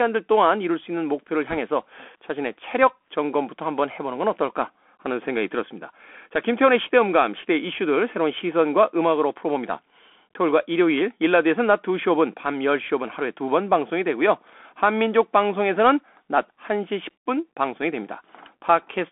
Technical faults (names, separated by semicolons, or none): Bluetooth CVSD headset codec; bit errors on a Bluetooth voice link